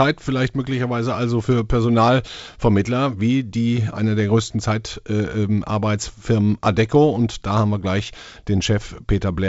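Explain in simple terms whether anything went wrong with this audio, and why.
Nothing went wrong: the speech arrives as an ordinary wideband phone call would, with G.722 coding carrying sound up to about 7.7 kHz and nothing above that, which is simply how that kind of call is built.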